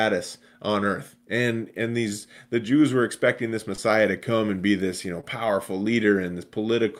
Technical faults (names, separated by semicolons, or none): short concealed packet loss